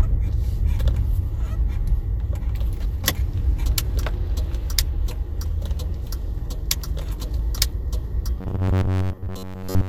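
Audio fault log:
8.41–9.88 s, robotic sound from repeated short buffers: the audio turns into a rigid, metallic buzz at about 94 Hz. The likely cause is audio arriving too seldom, so a roughly 11 ms chunk is looped in place of most of the real sound.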